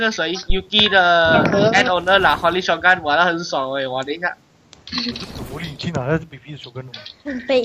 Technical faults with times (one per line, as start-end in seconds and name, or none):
0.50-0.56 phantom power thump